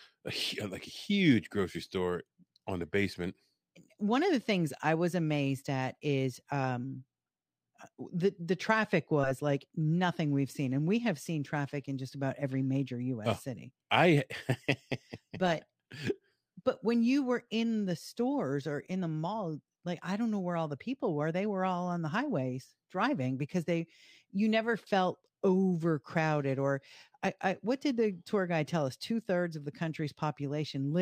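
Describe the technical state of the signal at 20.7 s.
At 20.7 s the sibilants carry a faint metallic shimmer over dulled highs. This is imaging from linear upsampling, present throughout the clip. Straight-line interpolation, apparently from about 22 kHz to 48 kHz, leaves mirror images near 11 to 22 kHz, around 40 dB down.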